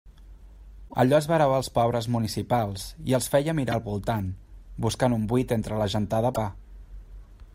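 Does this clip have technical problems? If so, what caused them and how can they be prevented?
Yes. Damaged data in the compressed stream produces brief disruptions at 0.85–0.94 s, 3.72–3.74 s after "municipals i els feia", and 6.30–6.38 s after "un buit entre la". The decoder misreads the corrupted frames and loses sync, which shows as broadband vertical smears and abrupt waveform discontinuities. Error-checked transfer and verified file copies prevent this.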